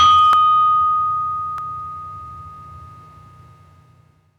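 New audio missed its deadline twice, at 0.33 s and 1.58 s, so the device replayed its last buffer, a repeated buffer fault. Each repeat is about 1.3 ms, which fits a 64-sample buffer, heard as a click or brief buzz with essentially nothing lost.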